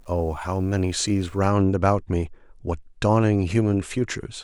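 From the start up to 1.5 s the speech has a grainy, gritty edge that tracks the signal itself. Quieter stretches get rougher, and the softest bits break up or sputter rather than fading cleanly. That's classic low bit depth without dither. The likely cause is the audio being rounded to about 9 bits with no dither, so the error stays locked to the waveform, sitting very roughly 40 dB under the speech instead of spreading out as a smooth hiss.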